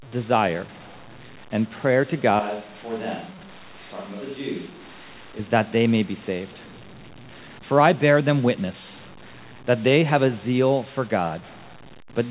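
Speech heard over a narrowband call path, with nothing above 4 kHz. From 2.40 to 5.39 s, right after "and prayer to", the sound turns suddenly hollow and roomy. It loses bass, drops roughly 10 dB and picks up more background noise. It snaps back before "that they may be". The likely cause is a switch to a distant microphone.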